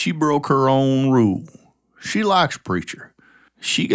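No technical faults are audible.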